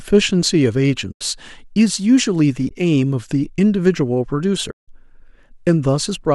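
AAC frame loss with muting at 1.12–1.21 s, 2.69–2.71 s and 4.71–4.88 s: lost frames decode as zeroed spectrum, so the speech fades into soft-edged gaps.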